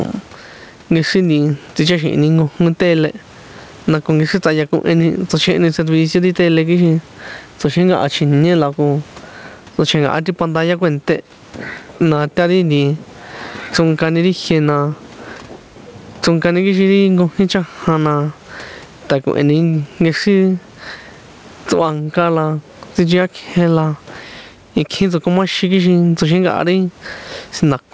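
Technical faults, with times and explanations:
Throughout: gain pumping. The faint room noise sits about 41 dB under the speech, while the level swings by roughly 15 dB, pulling loud and soft parts closer together. The likely cause is input gain set far too high, with a fast limiter pulling it down on each loud sound. On the waveform, peaks look flattened. On a spectrogram, content stops at 8 kHz.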